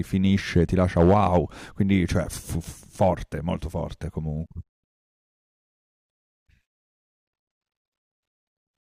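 Hard clipping hits the speech at 0.56 s, strongest from 0.99 to 1.38 s, and again near 3.01 s. Peaks overran the stage's limit by about 1 to 5 dB, flattening waveform tops. The spectrogram shows vertical smears of high-frequency harmonics, heard as crackling harshness.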